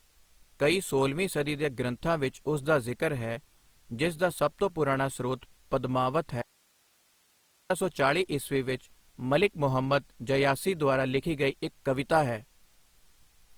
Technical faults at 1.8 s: Opus compression

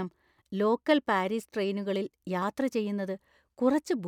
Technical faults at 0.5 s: clock drift buffer slips

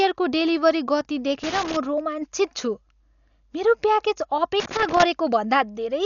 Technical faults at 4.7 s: Dolby Digital compression; loose connector crackle

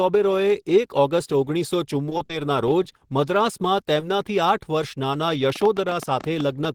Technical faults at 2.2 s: short stall from a late packet; short concealed packet loss

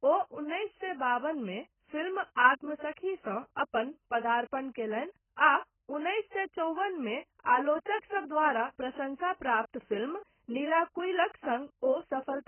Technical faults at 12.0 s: AAC compression

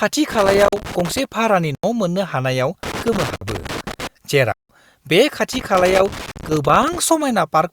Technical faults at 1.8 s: block of digital silence

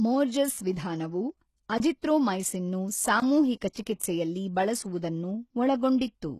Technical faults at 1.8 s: HE-AAC compression; block of digital silence

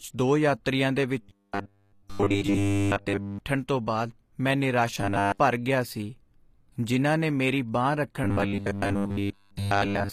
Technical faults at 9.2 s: HE-AAC compression; robotic sound from repeated short buffers

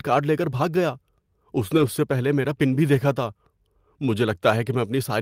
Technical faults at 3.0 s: lost packet rebuilt from error correction

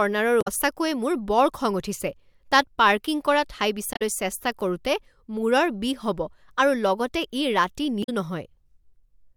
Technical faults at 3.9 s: damaged data in a compressed stream

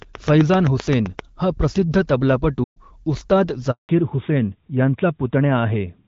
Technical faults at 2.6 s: playback stall

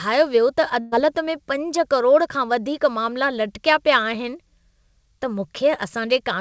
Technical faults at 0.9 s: burst of packet loss

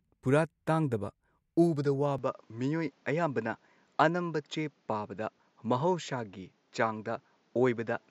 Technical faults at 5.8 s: input switched to a poorer device

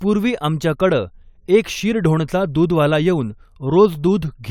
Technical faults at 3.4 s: none

